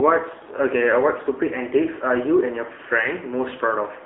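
From start to finish the speech sounds thin and boxed-in, with a buzzy, synthetic edge, nothing above 3.4 kHz and little below 300 Hz. This is the AMR narrowband mobile codec, a telephone-band vocal-tract model whose plainly audible roughness fits a low bitrate near 8 kbps.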